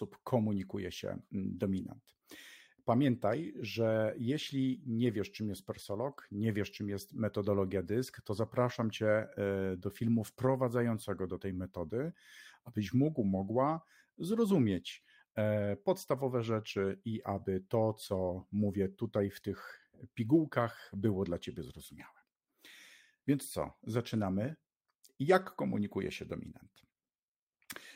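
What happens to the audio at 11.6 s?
Nothing goes wrong at 11.6 s; the speech carries on intact through that moment, with no dropout, click or distortion.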